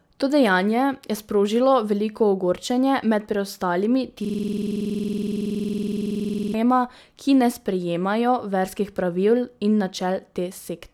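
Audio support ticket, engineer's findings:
System hang loop, 4.25–6.54 s, right after "veliko ogorčenje med preostalimi". One 46 ms slice of speech repeats exactly, around fifty times, giving a rapid 21.5 Hz stutter, close to a buzz. Probable component: audio driver or host stalled while the hardware kept replaying its ring buffer. The loop length fits a 2048-sample buffer. Unlike a dropout or a codec glitch, the audio doesn't go silent or smear: the identical fragment repeats until playback resumes.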